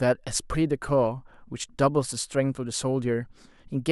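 The speech in this clip has no audible technical faults.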